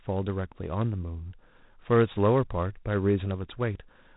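G.726 ADPCM coding damage runs through the whole speech clip, from start to finish. The codec sends each sample as a few bits describing its difference from an adaptive prediction, and with so few bits those differences are coarsely rounded. That rounding error is plainly audible as a harsh, rasping hiss that rises and falls with the speech level, a grain that fits the 24 kbit/s mode. Nothing above 3.8 kHz comes through, leaving the speech dull and telephone-narrow.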